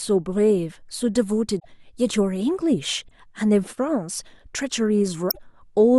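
A speech clip with damaged data in a compressed stream at three points. The first runs from 1.56 to 1.65 s, the second from 3.07 to 3.11 s, and the third from 5.29 to 5.39 s. Each is a brief disruption lasting roughly 40 to 95 ms. Corrupt bytes in the encoded file leave the decoder unable to read those frames. It loses sync and must hunt for the next valid frame header before clean sound resumes.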